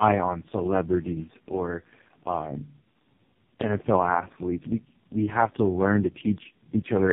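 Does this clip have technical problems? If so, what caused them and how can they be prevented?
Yes: tandem speech coding runs throughout. It sounds like three low-rate speech coders stacked, each re-coding the last one's damage, leaving rough, warbly audio with nothing above 3.7 kHz. Keeping the codec end to end with transcoder-free operation avoids it.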